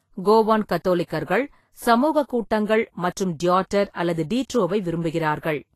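Throughout the speech, Vorbis compression damage is plainly audible. Nothing sounds above 14.2 kHz, and the treble has turned hissy and grainy, with attacks blurred. This likely comes from coarse quantisation of the residue, consistent with around 32 kbps.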